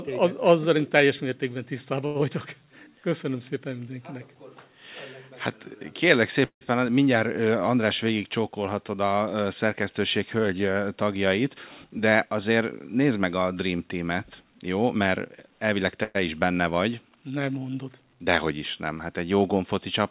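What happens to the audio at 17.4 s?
Nothing goes wrong at 17.4 s: the speech runs on intact through the WebRTC call path, with only the call codec's narrowband sound, nothing above 4 kHz, that fits G.711 A-law.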